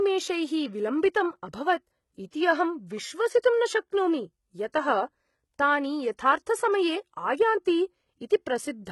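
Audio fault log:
throughout HE-AAC compression: heavily damaged speech with gritty, lispy s sounds and a synthetic, mistuned treble, likely from band replication at low bitrate, which fits about 16 kbps.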